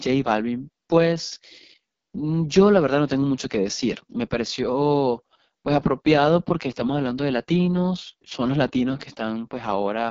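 From start to finish, the speech passes through an AMR wideband (HD Voice) codec that is heavily strained. It sounds rough and raspy, which fits the lowest AMR-WB rate of about 6.6 kbit/s, where too few bits reach the pulse model that rebuilds the voice. Nothing is present above 7.3 kHz, and the top band is filled with synthetic noise. That noisy top band separates it from narrowband telephone audio, which cuts off much lower and sounds muffled rather than grainy.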